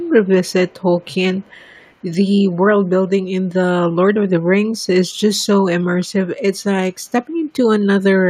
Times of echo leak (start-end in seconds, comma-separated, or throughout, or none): 0.00-0.09, 0.47-0.74, 1.01-1.94